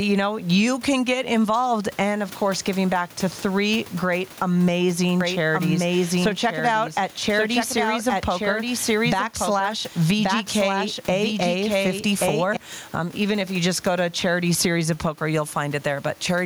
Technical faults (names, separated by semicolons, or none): gain pumping; doubled audio track